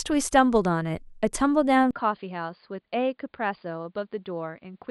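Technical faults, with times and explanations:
1.91–4.91 s, input switched to a poorer device: after a 20 ms gap the speech turns dull, cut off above 4.8 kHz, about 5 dB quieter, likely from a lesser mic taking over.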